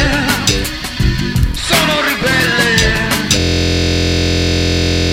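At 3.40 s the audio locks into a system hang loop that runs to the end. The system stalled while the hardware kept replaying one 23.22 ms stretch, which fits a 1024-sample buffer. It repeats about 75 times, giving a steady 43.1 Hz buzz.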